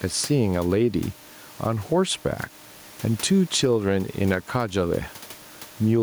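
Gain pumping runs through the whole of the speech. The room noise sits about 31 dB below the voice, and the level swings by something like 10 dB. The likely cause is input gain set far too high for the microphone, with a fast limiter or compressor clamping down on every loud syllable and releasing in the gaps. The result is squashed, breathing dynamics, with loud and quiet passages pushed unnaturally close together.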